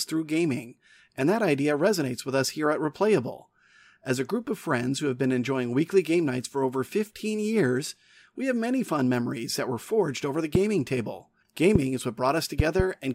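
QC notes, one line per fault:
10.55–10.58 s, 11.75–11.78 s, 12.60–12.82 s: loud pop. Four sharp pops sit on top of the speech, which carries on underneath. The first two are single and reach about 15 and 20 dB above the speech. The last is a quick pair, about 15 dB up. A sudden electrical pulse, likely from a plug, switch or static, was added to the signal.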